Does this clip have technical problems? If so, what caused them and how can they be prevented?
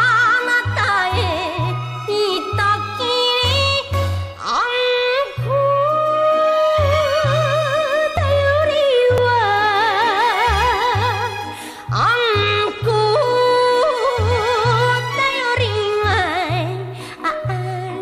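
Yes, there are jumps at 8.17 s and 9.18 s where the audio skips ahead by a few milliseconds, likely a dropped buffer (overrun), the input data overwritten before the program read it. A larger buffer or higher-priority recording thread should prevent it.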